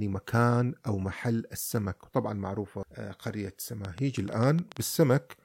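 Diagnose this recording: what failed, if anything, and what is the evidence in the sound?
There's a train of clicks from 3.85 to 4.78 s: about seven same-shaped pops, irregularly spaced at roughly 7.7 per second and peaking around 10 dB above the speech. Likely cause is interference coupling into the analogue wiring, or a struggling interface injecting pulses.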